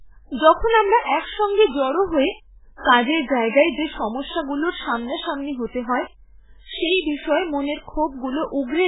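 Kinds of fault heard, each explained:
MP3 compression: the speech sounds watery and swirly with nothing above 3.8 kHz, likely an MP3 encoder starved of bits, which fits a very low bitrate.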